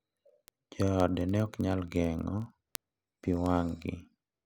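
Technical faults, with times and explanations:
0.11–4.44 s, word clock ticks: there's a steady train of sharp ticks across the speech, roughly one every 20 ms, so about fifty a second and a couple of hundred in all. It sounds like the receiving end of a digital link is running on its own clock, off from the sender's by around a tenth of a percent. Each time the two clocks slip past each other, a single sample gets dropped or doubled, and that glitch is the tick.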